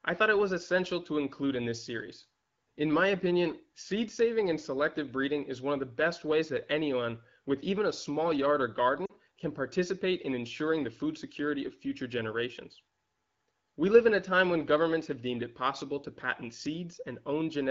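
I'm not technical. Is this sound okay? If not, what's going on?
No. Around 9.05 to 9.12 s there are lost AMR speech frames. A short gap, consistent with two dropped frames, was filled by the phone's decoder, causing the speech to drop briefly to near silence.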